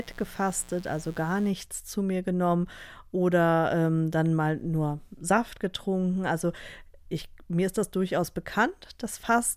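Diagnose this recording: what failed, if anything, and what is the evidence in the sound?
Mains buzz in the analogue wiring runs from 0.0 to 1.5 s, a raspy 60 Hz buzz some 25 dB under the speech. A spectrogram shows stacked horizontal lines at 60 Hz harmonics into the kilohertz range, and the waveform shows sharp spikes 120 times a second from switching interference.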